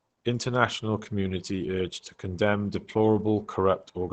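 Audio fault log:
throughout: Opus compression. The speech sounds muffled and hoarse, with plainly audible codec damage. This most likely comes from the encoder working in its SILK speech mode at a rate that fits about 16 kbps. That mode models the voice rather than preserving fine detail, and it is held to wideband. On a spectrogram the energy cuts off sharply near 8 kHz, and the harmonics below look smeared and blotchy instead of cleanly striped.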